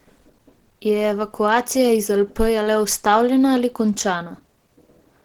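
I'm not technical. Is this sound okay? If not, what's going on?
No. Opus compression runs throughout: the speech sounds muffled, hoarse and grainy, likely because a low-data speech setting squeezed away fine detail to save space.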